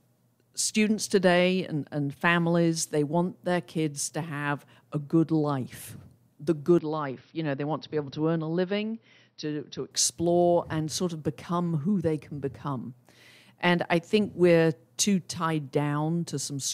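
Speech, with the input likely switched to a poorer device from 6.79 to 9.91 s. Without any gap, the sound loses everything above 5.8 kHz and turns duller, drops roughly 5 dB, and carries a new noise floor about 50 dB below the speech, until the original input returns.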